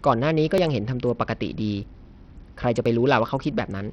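Throughout, the speech has flickering, missing treble and a gritty, aliased edge, likely from Bluetooth SBC compression at a very low bitrate. Unlike simple filtering, the top end comes and goes. At 0.58 s, 1.83 s and 2.86 s, a small forward jump with no silence points to a likely dropped buffer (overrun). Each time roughly 20 ms is skipped, where a dropout would leave a gap.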